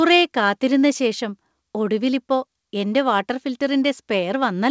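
No faults found in the speech; it carries the expected call-path band limit, with nothing above about 8 kHz, consistent with a wideband codec such as G.722.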